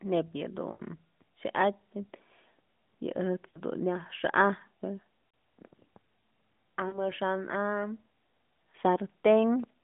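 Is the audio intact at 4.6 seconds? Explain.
Yes, the audio is intact at 4.6 seconds: the speech comes through the AMR narrowband mobile codec's roughly 150 Hz to 3.5 kHz telephone band with only the light coding colour expected at 12.2 kbps, and nothing breaks or drops out at that moment.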